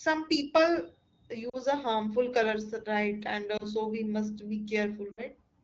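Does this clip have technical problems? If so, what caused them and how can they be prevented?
Yes. Lost AMR speech frames: radio errors corrupted frames so they failed their checksum, and the AMR-WB decoder filled each gap by repeating its last good pitch and vocal tract settings at falling gain. At 1.49 to 1.57 s (before "a harmful colors right"), 3.57 to 3.65 s (before "so we must be") and 5.11 to 5.23 s (after "so we must be"), the sound briefly warbles and dips. The last dip is longest, which fits several consecutive 20 ms frames going missing. Better radio coverage or stronger channel error protection would prevent this.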